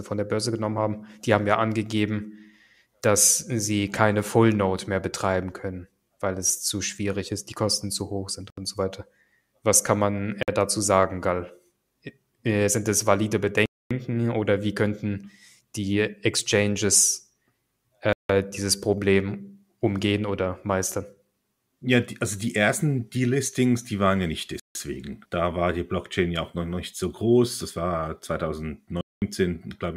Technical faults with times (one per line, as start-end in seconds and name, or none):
8.50-8.58 Bluetooth stall
10.43-10.48 Bluetooth stall
13.66-13.91 Bluetooth stall
18.13-18.30 Bluetooth stall
24.60-24.75 Bluetooth stall
29.01-29.22 Bluetooth stall